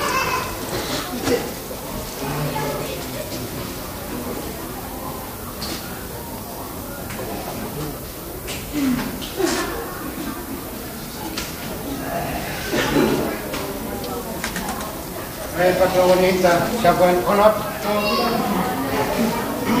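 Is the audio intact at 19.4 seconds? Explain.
No. At 19.4 s the audio carries low bit depth with noise shaping, which runs through the whole clip rather than starting at that moment. The signal is quantised very coarsely, which fits about 7 bits, and the rounding error is fed back so that it is pushed toward the high frequencies. The result is a steady, thin hiss that climbs sharply toward the top of the band, sitting only around 10 dB below the signal.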